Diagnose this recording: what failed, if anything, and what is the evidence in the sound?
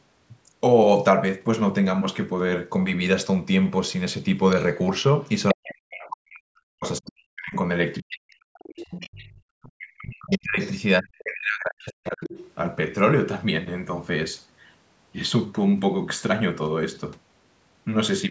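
Call processing, echo path: the other side's voice is leaking through from 4.59 to 11.22 s and again briefly from 12.25 to 12.51 s. A second voice sits roughly 15 dB below the talker. The likely cause is loudspeaker playback reaching the microphone and surviving the echo canceller. On a spectrogram it shows as a faint second set of harmonic traces under the main speech. In the waveform it appears as low-level activity filling the talker's pauses.

Call processing, echo suppression: speech is suppressed in double talk between 5.53 and 12.31 s, while both sides are active. The talker's level repeatedly dips or drops out, at worst by around 40 dB, for roughly five seconds in total across that span. Likely unable to separate near speech from echo, the canceller attenuates both. In the waveform the envelope shows gouged, pumping gaps. On the spectrogram the harmonics break into fragments. The spectrum tops out at 8 kHz throughout.

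Call processing, echo canceller gating: the background is gated by the echo canceller from 9.32 to 9.42 s. The room sound falls by about 15 dB for 100 ms, then recovers once the canceller releases. The clamp engages because loudspeaker output was detected. On a spectrogram the noise floor shows a brief dark vertical notch across all frequencies. In the waveform there is a short, sharp dip in the low-level background.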